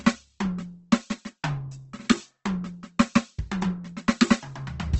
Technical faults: Opus compression

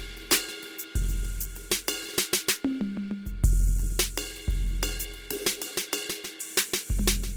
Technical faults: Opus compression

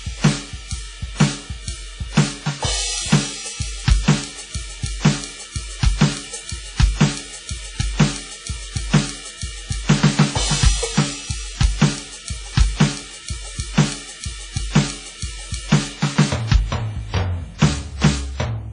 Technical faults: WMA compression

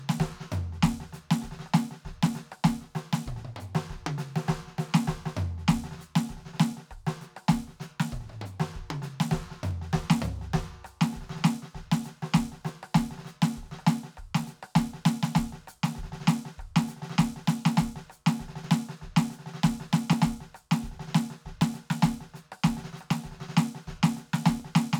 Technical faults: clock drift buffer slips

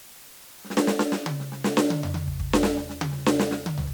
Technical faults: low bit depth with dither

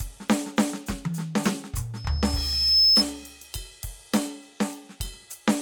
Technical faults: loudspeaker feedback squeal

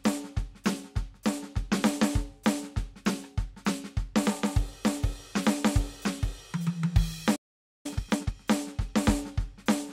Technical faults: playback stall; time-compressed catch-up

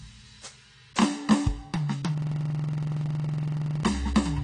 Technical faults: AAC compression; system hang loop

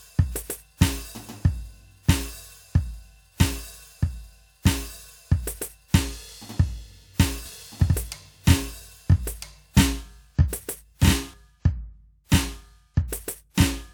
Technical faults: doubled audio track

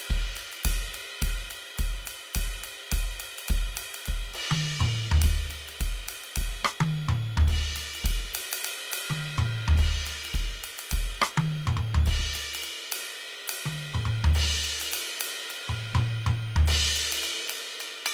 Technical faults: switching supply whistle; Opus compression

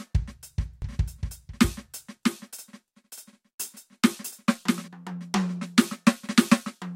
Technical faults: doubled audio track

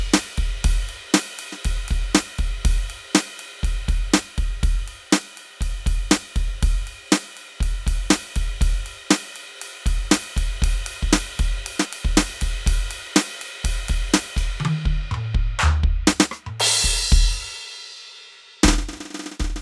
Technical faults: none

